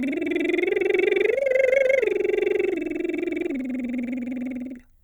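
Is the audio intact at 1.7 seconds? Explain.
Yes, the music plays through 1.7 seconds without any audible fault.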